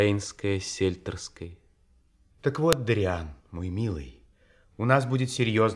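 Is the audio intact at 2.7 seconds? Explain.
No. At 2.73 s there is a file header played as audio: a WAV piece was joined without stripping its header, so those few dozen header bytes were played back as sample values. The result is a sharp, loud click in the speech.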